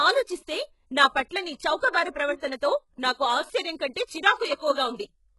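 From start to finish the speech carries heavy coding damage, most likely HE-AAC compression at a very low bitrate, which fits roughly 12 kbps. The treble is still present rather than dulled, running up to about 11.5 kHz, but it sounds synthetic: s sounds come out gritty, metallic and lisped because the upper band is rebuilt from copied lower bands instead of coded directly. A plain low-pass codec would sound muffled instead.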